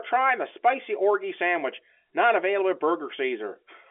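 Nothing goes wrong here: the speech comes over a normal telephone line that sounds like G.711 A-law coding, with the usual band of roughly 250 Hz to 3.4 kHz and nothing above about 3.7 kHz.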